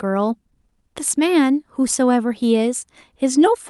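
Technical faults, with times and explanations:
No technical faults can be heard in this speech clip. There is nothing here that calls for a time or an explanation.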